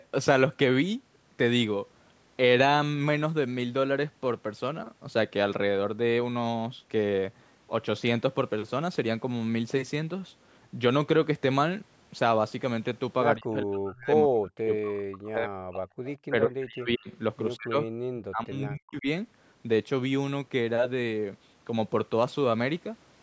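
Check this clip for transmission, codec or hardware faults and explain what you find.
Two problems show up in the back half, both pointing to a speakerphone-style call struggling with both sides talking at once.

Speech suppressed in double talk at 13.36–15.85, 16.28–17.2, 17.57–17.93 and 18.13–19.07 s: the voice dips by roughly 40 dB, likely the echo canceller ducking it during overlap.

Echo leak at 16.06–16.1 and 17.12–17.17 s: brief faint scraps of the voice come back about 170 ms late, likely residual loudspeaker pickup slipping through.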